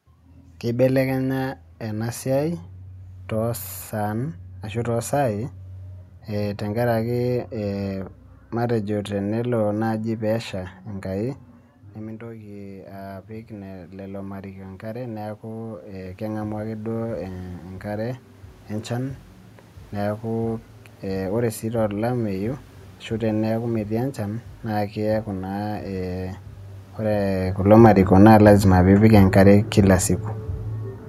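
At 10.53 s, just after "matejo tenelo naaji", automatic gain rising begins. Around 11.5 s the talker moves away and the input drops by about 16 dB. The control slowly adds about 13 dB until 17.23 s. Voice and room noise swell together.

Around 27.0 s the talker moves. Automatic gain falling starts at 27.64 s. The control trims about 3 dB by 30.11 s. The voice sinks gradually, and the background sinks with it.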